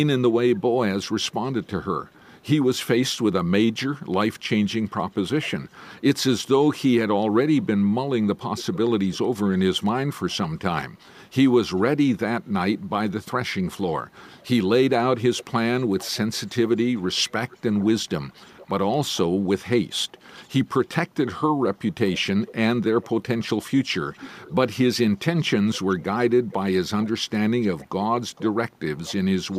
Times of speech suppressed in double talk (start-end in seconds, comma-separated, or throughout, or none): none